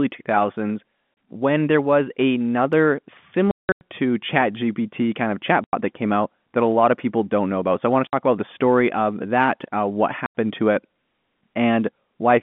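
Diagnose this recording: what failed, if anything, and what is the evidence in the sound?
Network stage: packet loss filled with silence. The speech drops to dead silence with hard edges at 1.16 s before "when there was another", at 3.51 to 3.81 s as a scattered burst with a longest gap near 180 ms, at 5.64 to 5.73 s between "kind of" and "that came out that", at 8.07 to 8.13 s, and at 10.26 to 10.34 s between "of that uh what" and "to it". The other gaps are 30, 60 and 90 ms long, which fits 30 ms packets. The receiver played silence instead of concealing them, over a narrowband telephone line.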